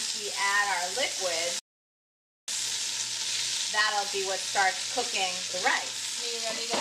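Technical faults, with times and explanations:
1.59–2.48 s, playback stall: the sound cuts out mid-flow and the output goes completely silent for about 0.89 s, then resumes. The break is abrupt at both ends, with no fade, which sets it apart from a natural pause in the material. This is likely the player running short of buffered data, or its audio thread being held up, so nothing reached the output until it caught up.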